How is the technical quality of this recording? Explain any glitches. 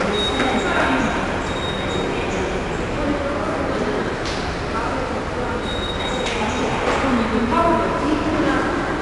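The quality is held back by one fault that runs the whole length: 4-bit ADPCM compression. Every louder sound carries a gritty hiss that rises and falls with it, and the sharp attacks sound roughened. Nothing is heard above about 10.7 kHz, so the whole recording sounds dull. That cut-off suggests a sample rate near 22 kHz, which fits a data rate of about 89 kbps. The codec stores each sample as a coarse 4-bit step from a predicted value and keeps resizing that step. The rounding error comes out as noise that tracks the loudness. On sudden transients the step cannot grow quickly enough, and those onsets are smeared into distortion.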